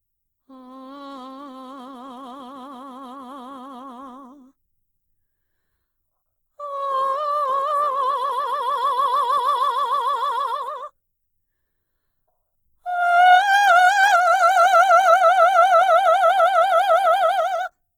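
From start to finish the music sounds rough and grainy, with tones turning noisy rather than clean. This is likely Opus compression in its music (CELT) mode, starved of bits at a rate that fits about 16 kbps. Each band keeps its energy, but the detail inside is filled by folding or noise. Unlike MP3 damage, there is little swirling or holes, and the full bandwidth is kept up to about 20.2 kHz.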